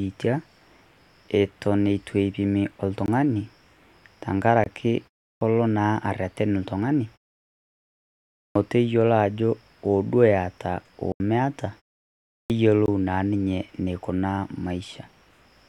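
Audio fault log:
3.06–3.08, 4.64–4.66, 11.12–11.20, 12.86–12.88 s, block of digital silence: the output buffer likely went unfilled in time and was played as zeros, so the speech drops abruptly to nothing and back. The 20 ms gaps land as brief holes, and the 80 ms one at 11.12 s as a short hole.
5.33, 8.47, 12.42 s, clipped start after a pause: after silences of 0.32, 1.38 and 0.69 s, the output device slept and needed time to wake. Roughly 80 ms of each new phrase is swallowed, so speech begins abruptly without its opening sounds.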